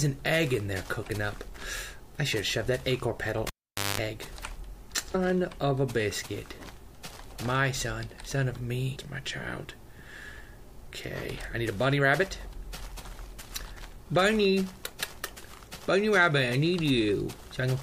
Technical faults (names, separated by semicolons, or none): cable pulled and plugged in; compressed frames skipped